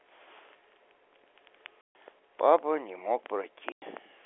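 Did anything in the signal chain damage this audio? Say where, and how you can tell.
Yes, at the network stage: packet loss filled with silence. The speech drops out completely from 1.81 to 1.95 s (140 ms) and from 3.72 to 3.82 s (100 ms), and both holes begin and end with hard edges rather than fades. Gap lengths in exact multiples of 10 ms point to 10 ms packets going missing, with the receiver inserting silence instead of concealing them. The telephone-band G.711 coding underneath is intact.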